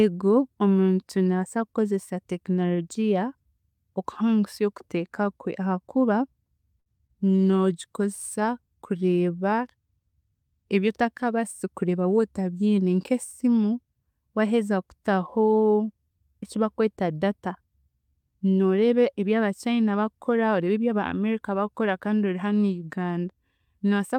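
At 6.79 to 6.88 s there is a short stall from a late packet. The jitter buffer ran dry and the receiver held the last sound for 65 ms until the packet turned up. Nothing is lost, but the speech hangs briefly with a slight buzz or dip, and the playout delay grows by 65 ms.

Right after, two short concealed packet losses follow at 6.98 to 7.01 s and 7.07 to 7.11 s, each missing 20 ms of audio. The decoder extended the preceding sound to bridge each gap and then blended back in, which is heard as quick smears or wobbles.

From 7.21 to 8.49 s comes a call bitrate drop. The encoder's rate fell from 64 to 28 kbps and stayed at the bottom for 1.18 s, so the speech is coded more coarsely and takes on a rougher, watery texture until the rate climbs back.

At 11.67 to 12.33 s a jitter buffer speed-up trims excess buffered audio by repeatedly cutting pitch-period-sized slices, around 70 ms in total. 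Speech runs at about 111% speed with unchanged pitch and sounds rushed.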